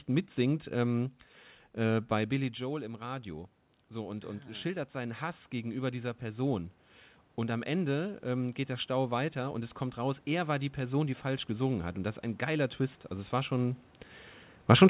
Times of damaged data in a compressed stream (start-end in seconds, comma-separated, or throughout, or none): none